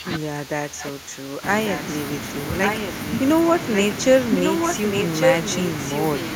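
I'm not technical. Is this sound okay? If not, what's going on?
No. From the start to 1.43 s, the voice dips and thins out in patches. This is speech suppressed in double talk. Both sides were likely talking at once, and the call's echo control turned this voice down along with the echo.

Then comes echo leak. A repeat of the voice arrives about 1.15 s late, at 1.67 to 1.81 s, 2.63 to 2.92 s, 3.74 to 3.82 s, and 4.37 to 5.66 s. It starts faint and grows as loud as the speech itself.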